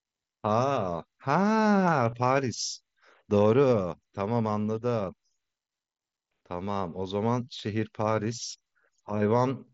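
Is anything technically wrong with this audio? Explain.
Yes. Concealed Bluetooth headset packet loss occurs at 2.11 s in this speech clip. About 15 ms of audio travelling between the headset and the phone never arrived, which fits a couple of consecutive lost packets. The receiver filled the hole by repeating the best-matching stretch of the waveform it had just played. Because the packets were lost in a run, the patch sounds like a brief buzzy tone held at full level, with a small warble where the real audio returns. The mSBC headset link itself carries the speech as wideband audio.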